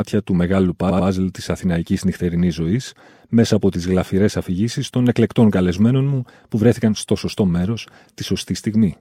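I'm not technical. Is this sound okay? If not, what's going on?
No. At 0.89 s a short chunk of the stored audio was repeated frames: an 83 ms piece plays twice more, so the speech stutters until 1.07 s.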